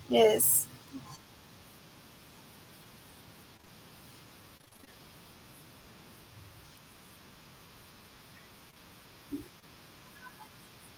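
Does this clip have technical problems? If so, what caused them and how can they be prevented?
Yes. The speech has two kinds of network fault.

Short concealed packet loss occurs at 1.15 s, at 3.57, 3.61 and 3.65 s (three back to back), at 8.71 and 8.74 s, and at 9.60 s. Each time about 20 ms of audio failed to arrive, which fits 20 ms packets. The decoder bridged each gap by extending the preceding sound, producing a brief smear or wobble. On a spectrogram these show as thin strips where harmonics flatten or blur. A larger jitter buffer or forward error correction would prevent this.

Repeated packet loss (robotic sound) runs from 4.57 to 4.89 s. Eight gaps, the longest 27 ms, left roughly half that stretch synthesized rather than received. Concealment chained one patch after another, giving a choppy quality with pieces missing. The spectrogram shows a stuttering comb of smeared, static harmonic segments. 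The waveform shows repeated near-identical cycles between breaks. Fixing the congested or unstable network path, for example by moving from weak Wi-Fi to a wired link, would prevent this.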